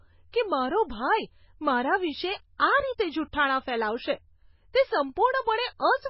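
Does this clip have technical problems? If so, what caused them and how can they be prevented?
Yes. Throughout the speech, the sound is dull and watery, with swirling, chirpy s sounds and nothing above 5.5 kHz. This is likely MP3 compression at a very low bitrate, around 16 kbps, where weak frequency lines are dropped and flicker between frames. Encoding at a higher bitrate or using a speech-oriented codec would prevent it.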